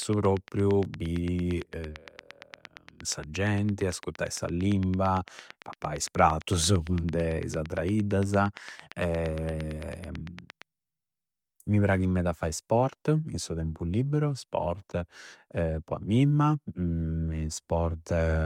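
From 0.02 to 10.63 s a train of clicks ticks at a regular 8.8 per second, peaking a few dB above the speech, likely from electrical interference.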